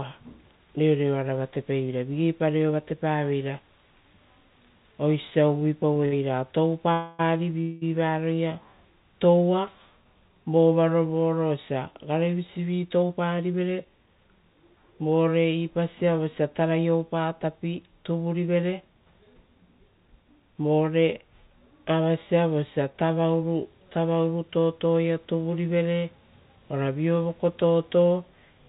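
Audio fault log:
5.30–6.14 s, repeated stalls (stutter): six short holds, the longest 63 ms, stretch the last sound while late packets trickle in. The speech drags in jerks without dropouts, unlike a single freeze.
6.92–7.21 s and 7.61–7.83 s, call audio freeze: the sound hangs for 264 ms and then 206 ms as a fading buzz, likely from held-up packets emptying the jitter buffer, before resuming without loss.
12.59–14.44 s, 18.26–20.85 s, 22.93–23.25 s (after "avasia vosia") and 26.57–26.89 s (after "totoia tuvurivere"), jitter buffer speed-up: the receiver trims pitch periods to shed excess delay, about 0.2 s and 0.3 s in the longer stretches. The speech runs 9–13% faster at unchanged pitch, hurried rather than broken.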